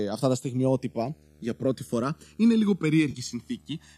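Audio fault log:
Throughout: channels drifting apart. Folded to mono, the speech takes on a slow flanging, a hollow sweep that moves gradually through the spectrum rather than holding still. The two channels appear to run from devices on separate clocks differing by around 200 ppm, so the gap between them creeps steadily, reaching roughly a millisecond by the end. As that delay grows, the comb-filter notches it produces slide downward in frequency, which is the moving phasiness heard.
0.53 to 3.97 s: video or display buzz. From just after "αυτά τα" a low, steady buzz sits under the speech at about 35 dB below it, with a hashy edge. Its fundamental is 75 Hz, matching a display refreshing at 75 fields per second, which points to a monitor or video cable coupling into the audio path. The harmonics stacked above that rate give the buzz its gritty texture, and it persists to the end.
3.11 s to 3.18 s: AAC frame loss with concealment. 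For 40 ms the speech turns smeared and phasey, as if briefly blurred, then snaps back. The gap fits four consecutive lost frames of low-delay AAC, consistent with a 64 kbps AAC-ELD stream, likely the low-delay codec of a call. The decoder filled the hole by reusing the last good spectrum with altered phase, so the loss stays short and noisy rather than dropping to silence.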